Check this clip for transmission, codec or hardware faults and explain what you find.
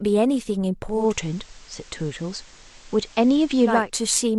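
One fault is present: digital radio blending to analogue, from 0.84 s to 3.94 s. The receiver loses its digital stream and cross-fades to the FM broadcast of the same station over about 350 ms. It returns to digital at the end. During the FM stretch, hiss rises to roughly 30 dB below the speech. The level shifts by about 2 dB.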